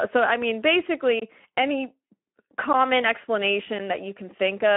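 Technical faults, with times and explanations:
Throughout, Speex codec: the speech has the rough, hoarse and noisy texture of a CELP coder with too few bits to model the excitation, a level of damage that fits a bitrate around 11 kbps. It is also squeezed into a telephone-style band of about 250 Hz to 3.4 kHz, with nothing above 3.7 kHz, so the voice sounds thin and muffled, and sibilants lose their crispness.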